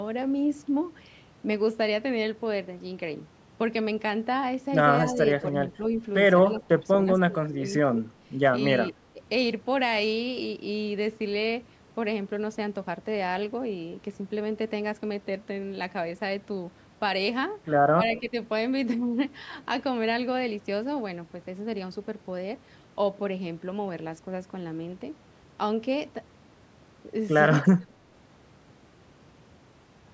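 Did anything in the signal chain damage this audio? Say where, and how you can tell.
Yes. Speech suppressed in double talk, at the call-processing stage. The speech dips by about 5 to 15 dB at 5.13, 6.52 to 7.92, 8.91 to 9.21 and 17.96 to 18.34 s. The echo canceller likely ducked the talker during crosstalk.

An echo leak, also from call processing. Faint delayed copies of the speech, about 20 to 25 dB down, appear at 6.56, 18.15 and 27.57 to 27.91 s. They lag by 223, 208 and 208 ms. Loudspeaker echo likely slipped past the canceller.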